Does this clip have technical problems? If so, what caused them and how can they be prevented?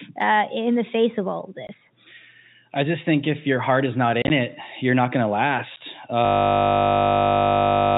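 Yes. Short silent holes with hard edges cut the speech at 1.67–1.69 s after "face of all of", at 5.76 s after "you're not going to", and in a scattered cluster between 4.22 and 4.30 s after "your heart is not", before "it you're not going". This is packet loss filled with silence. Lost audio was replaced by silence in steps that fit 10 ms packets, with about 50 ms missing across that 80 ms stretch and the longest gap lasting 30 ms. Using jitter buffering with packet loss concealment, plus forward error correction or redundancy, would mask or recover these gaps.

From 6.25 s to the end, the sound turns into a steady 50 Hz buzz. This is a system hang loop. The software stalled while the audio hardware kept replaying the same 20 ms of its ring buffer, dozens of times over. Giving the audio thread priority and adding a watchdog that mutes output when the buffer stops refilling would prevent it.

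The telephone band limit from the G.711 A-law coding can be heard throughout, but that coding is not causing these faults.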